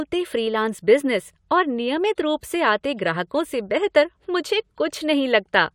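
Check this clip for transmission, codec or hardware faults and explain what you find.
No faults turn up anywhere in this speech clip.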